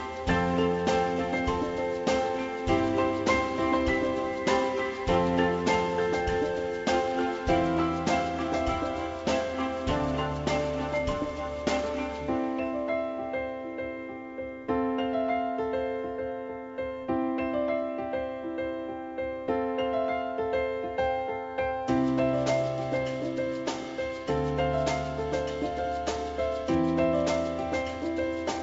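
No technical faults can be heard in this audio.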